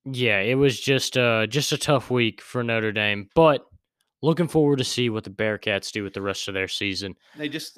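Nothing in this recording of speech jumps out as a technical fault; every moment sounds just as it should, with no glitches, dropouts or distortion to point to.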